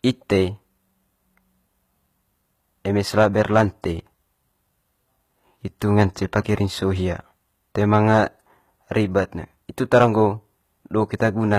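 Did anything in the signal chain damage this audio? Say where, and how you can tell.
Yes. Throughout the clip, gritty, lispy treble that stops near 14.9 kHz points to the codec stage: likely HE-AAC compression at about 20 kb/s, with the upper band rebuilt from copies of lower bands.

Hard clipping at a gain or converter stage, overdriven by about 1 to 5 dB, flattens peaks at 3.18–3.61, 7.94–8.19, 9.94–10.23 and 11.53–11.57 s, adding harsh crackle.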